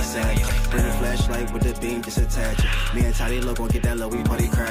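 At 0.47 s the sound breaks into a short glitch that lasts until about 0.50 s. This is damaged data in a compressed stream. Some bytes in the encoded stream were corrupted at that point. The decoder could not read those frames correctly. It lost sync and had to hunt for the next valid frame header. What comes out meanwhile is a brief blip, roughly 36 ms long, before decoding resumes.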